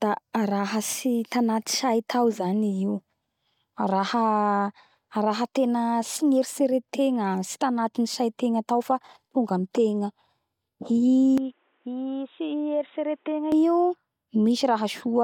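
Speech that turns dull from 11.38 to 13.52 s, with nothing above 3.8 kHz, a level about 5 dB lower and a new noise floor, so likely an input switched to a poorer device rather than mere filtering.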